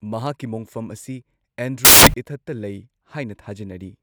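A speech clip with one fault. From 1.85 to 2.14 s, the samples are built from the wrong bytes. The reader misassembles each sample, so the fast-changing low bits dominate. The result is a burst of loud, harsh broadband noise lasting about 0.3 s.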